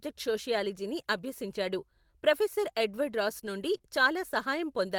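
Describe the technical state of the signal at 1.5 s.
A brief rough, noisy patch from 1.49 to 1.51 s, with no gap or dropout. This is a lost packet rebuilt from error correction: the missing 20 ms, which points to a single lost packet, was filled from a low-bitrate copy carried in the following packet.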